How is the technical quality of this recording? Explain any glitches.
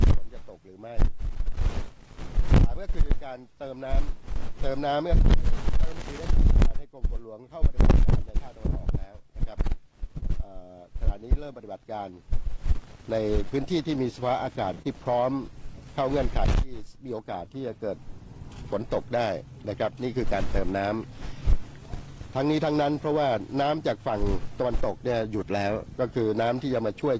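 The recording has audible network glitches: two brief stalls, a short stretch of sped-up playback, and one concealed packet loss. All are clustered around 10 and 14 to 15 seconds. The audio passed through a wideband call codec, likely G.722, so there is nothing above 8 kHz.

At 10.18–10.25 s and again at 14.75–14.82 s there is a short stall from a late packet. A packet arrived late, the jitter buffer ran dry, and the receiver stretched the last sound by 38 ms and 47 ms respectively before resuming. Nothing is lost, but a sound hangs on slightly too long with a slight buzz or dip.

From 13.45 to 14.23 s there is a jitter buffer speed-up. The buffer was holding more audio than its target, so the receiver trimmed a series of tiny pitch-period slices, about 50 ms in total. Playback runs about 5% fast at unchanged pitch and feels slightly rushed.

At 14.82–14.87 s, immediately after the second stall, there is a short concealed packet loss. 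About 30 ms of audio never arrived, and the receiver covered the gap by extending the preceding sound for 20 ms and blending back in. The result is a brief smear or wobble, and a short sound there may be lost.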